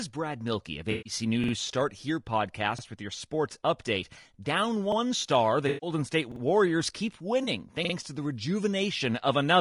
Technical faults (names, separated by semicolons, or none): low-delay AAC compression; AAC frame loss with concealment; repeated buffer